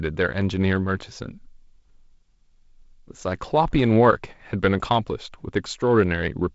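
Nothing goes wrong in this speech clip; it's just ordinary G.722 wideband telephone audio at 48 kbit/s, so the top end stops around 7.7 kHz and the coding leaves only a light trace on the sound.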